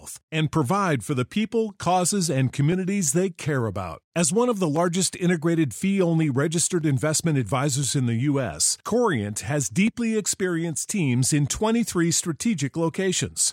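Periodic USB or driver dropouts run from 0.68 s to 12.94 s, repeating every 1.02 s. Something stalls the audio path at each interval, and a fraction of a millisecond of speech is skipped, leaving about 15 evenly spaced ticks wherever speech is present.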